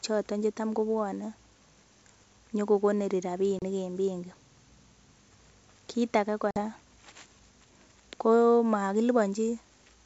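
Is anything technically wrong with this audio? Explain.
Yes, there's packet loss on an ADPCM call, twice. At 3.59 to 3.63 s about 30 ms of speech drops out, and at 6.51 to 6.60 s a longer 50 ms hole opens, which points to a handful of packets gone each time. The gaps were filled with silence, so the edges are abrupt. Because the receiving decoder's predictor and step size drift away from the sender's during the gap, the speech comes back with some roughness, then settles over the next few tens of milliseconds. The underlying G.722 wideband coding still reaches up to about 7 kHz with only faint codec texture.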